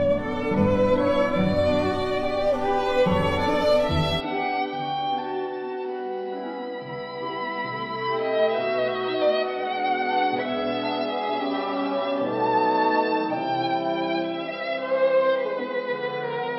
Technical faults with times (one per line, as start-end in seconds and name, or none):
4.20-16.58 input switched to a poorer device